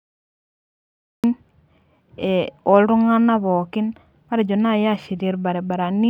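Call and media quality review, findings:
Cut-off start: digital silence 0.00 to 1.24 s, then speech enters abruptly mid-sound at 1.24 s, no natural attack or fade-in. Probable component: capture or stream start path. Recording began late, clipping the opening of the first utterance.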